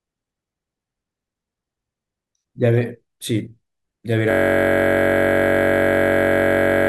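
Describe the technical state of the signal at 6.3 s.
At 6.3 s you're right in the middle of a system hang loop that kicks in at 4.31 s and never lets go before the end. The machine or driver has stalled while the audio hardware keeps replaying its ring buffer, so one 21.33 ms slice repeats over a hundred times, which fits a 1024-sample buffer. Because the slice is so short, it comes across as a steady buzz at about 46.9 Hz.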